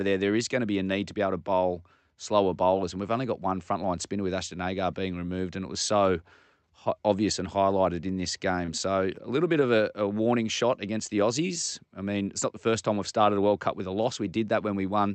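At 8.65 s, just after "and highlighted in this", there is a short stall from a late packet. It lasts until 8.71 s. A packet arrived late, and the jitter buffer ran dry. The receiver held the last sound for about 23 ms while it waited. Then playback resumed from the same point, so nothing is lost. You hear one sound drawn out slightly too long, with a faint buzz or dip.

From 9.60 s to 10.18 s comes a jitter buffer slow-down. It starts after "a little bit" and ends before "shot against the". The buffer needed more reserve. So the receiver repeated single pitch cycles, one after another. This added about 44 ms over the stretch. The speech plays at 94 percent speed, with the pitch unchanged. Sounds are drawn out. Throughout, the call path removes everything above about 8 kHz.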